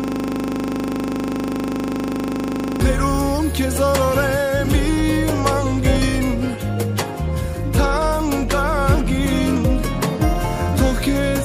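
From the very start until 2.81 s, the audio is caught in a system hang loop. It is already under way when the clip begins. One 40 ms slice of sound repeats exactly, about seventy times over. That points to a frozen computer or driver while the sound hardware kept replaying the same ring buffer, which fits a 40 ms buffer. Such a short loop, at 25 Hz, is heard as a steady, rough buzz rather than a stutter.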